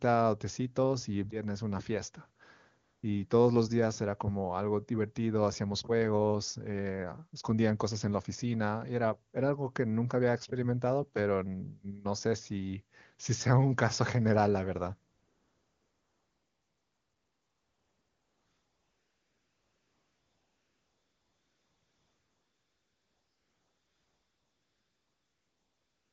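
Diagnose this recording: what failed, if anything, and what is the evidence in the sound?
AMR comfort noise, at the call-processing stage: for 200 ms from 2.83 s, and from 15.11 s to the end, the phone sent no speech frames and the receiver filled the gaps with synthetic noise. A spectrogram shows smooth, featureless noise switching in abruptly, and the waveform envelope goes flat.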